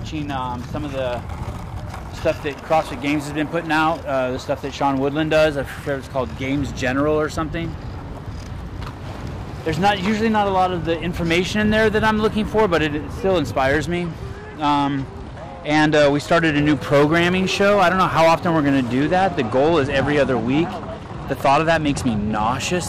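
From 13.95 to 16.79 s and again from 19.02 to 22.49 s there's a Bluetooth SBC bit pool drop: the treble goes dull and gritty, which fits the bit pool falling to about half.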